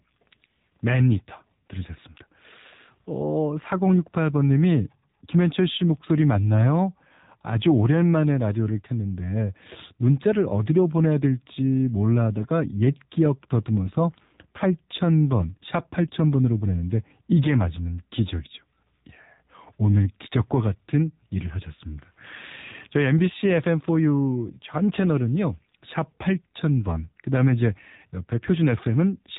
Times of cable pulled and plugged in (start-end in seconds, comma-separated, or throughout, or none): none